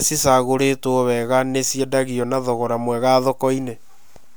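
No technical faults can be heard anywhere in this recording of speech. Nothing at any moment suggests a break, glitch or failure in how the audio was captured or carried.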